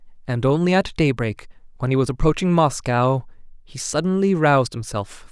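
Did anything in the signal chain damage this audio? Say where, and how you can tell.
No, nothing in the signal chain damaged this audio.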